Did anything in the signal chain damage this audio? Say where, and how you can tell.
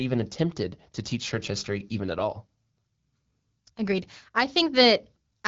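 No, nothing in the signal chain damaged this audio.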